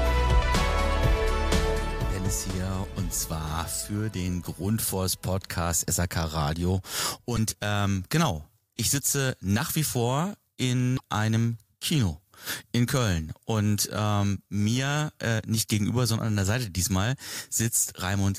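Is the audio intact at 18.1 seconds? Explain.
Yes, the audio at 18.1 seconds is intact, with no dropout, glitch or other fault at that point.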